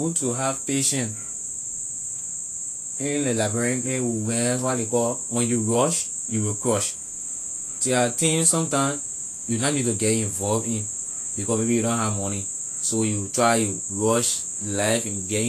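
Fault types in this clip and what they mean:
Vorbis compression: the speech sounds hissy and grainy all the way through, and nothing comes through above about 14.2 kHz. That points to a low-bitrate encode, likely Vorbis at something in the region of 34 kbps. At that rate the encoder drops the top band and quantises the remaining treble so coarsely that its fine detail turns into noise of similar energy. That's why the sibilants fizz and consonant onsets lose their crispness.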